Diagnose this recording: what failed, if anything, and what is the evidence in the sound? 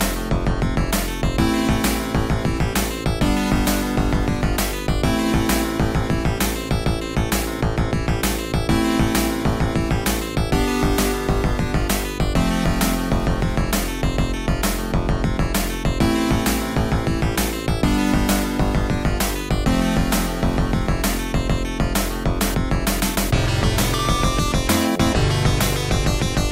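Clicks repeat every 4.84 s, from 4.70 to 24.05 s: likely clock drift buffer slips, with two clocks about 150 ppm apart forcing the buffer to drop or repeat samples.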